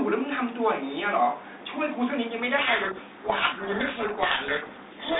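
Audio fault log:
2.58 s to end, codec payload misread: from 2.58 s the speech sinks under harsh, grinding distortion because the decoder takes the G.726 code words in reversed bit order. Unlike the light coding damage of working 32 kbit/s G.726, the damage begins abruptly and persists.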